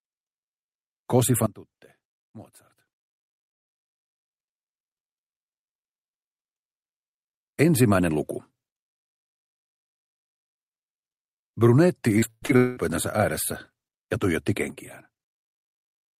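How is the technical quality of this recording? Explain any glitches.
The recording has three glitches, two level drops and one choppy stretch.

From 1.46 s to 4.31 s there's a sudden gain jump. The level falls by about 21 dB in an instant and comes back at 4.31 s, with the background dropping along with it. The likely cause is a gain setting applied with no ramp. The same sudden gain jump happens again at 14.70 s, this time about 6 dB down, and it stays there to the end.

Between 12.19 s and 12.79 s there's repeated packet loss that gives a robotic sound. It sounds like four holes, the longest around 194 ms. Each one gets patched by stretching out the last bit of audio, so around 60% of that span is fill, and it comes out choppy with pieces missing.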